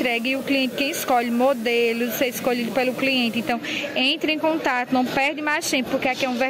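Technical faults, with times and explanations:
0.00 to 3.52 s, low bit depth with dither: a constant, even hiss sits under the sound, roughly 20 dB below it, and then stops cleanly at 3.52 s. The level points to something near 6-bit resolution. Dither added before the coarse rounding turns the quantisation error into steady white noise rather than distortion. On a spectrogram this appears as a flat, uniform noise floor across all frequencies that ends abruptly. The waveform shows a thickened, fuzzy trace.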